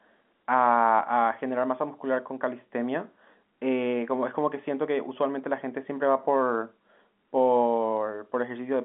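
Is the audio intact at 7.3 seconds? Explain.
Yes, at 7.3 seconds the audio is intact, with only the narrow telephone band of G.711 telephone coding, nothing above about 3.8 kHz, and no break or damage at that moment.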